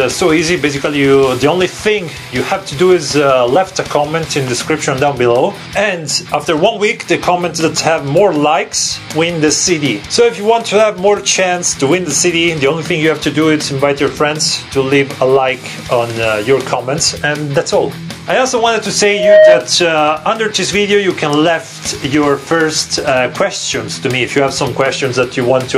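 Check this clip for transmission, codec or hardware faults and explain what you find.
Two faults are audible: continuous gain pumping across the whole clip, and a brief loudspeaker feedback squeal near the end.

Gain pumping runs from start to finish. The level swings by around 10 dB. Loud and quiet passages sit unnaturally close together, giving a squashed, breathing character. The likely cause is input gain set far too high for the microphone, with a fast limiter or compressor clamping down on each peak and releasing in the pauses.

A loudspeaker feedback squeal occurs from 19.03 to 19.71 s. A single tone at 623 Hz rises out of the sound over roughly a third of a second and peaks at about 10 dB above the programme level before it stops. The microphone was picking up the loudspeaker it was feeding. At 623 Hz the loop gain went above unity, so that frequency kept recirculating and growing on its own.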